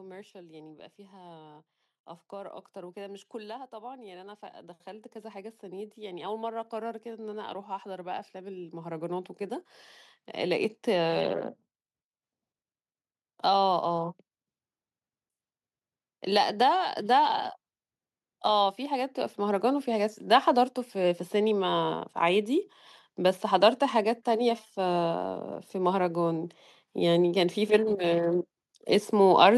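From 0.32 s to 11.46 s the speech shows automatic gain rising: the gain control judged the input too quiet and kept turning it up, by about 20 dB in total across those eleven seconds. Voice and background noise swell together, so the room floor grows audibly louder between phrases. On the waveform the envelope widens steadily like a slow ramp, and the spectrogram brightens uniformly at all frequencies, including the gaps.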